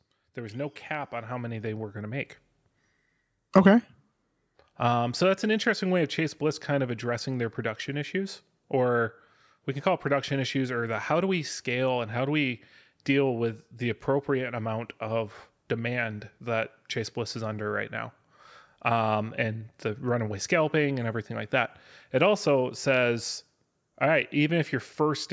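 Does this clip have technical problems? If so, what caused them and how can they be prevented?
Yes. Automatic gain rising, 0.34 to 2.35 s. The gain control found the input too quiet and lifted speech and background together by about 9 dB. Set the input level beforehand.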